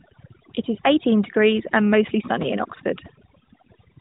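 From start to finish, this speech clip carries overdone noise removal. The suppressor was set so aggressively that any frequency band sitting near its noise estimate is pulled far down or shut off, taking the softer parts of the voice with it. Pauses drop to near silence dotted with twinkling specks. A spectrogram shows scattered isolated dots in the gaps and ragged, hollowed harmonics, all beneath the narrowband mobile codec's ceiling at 3.8 kHz.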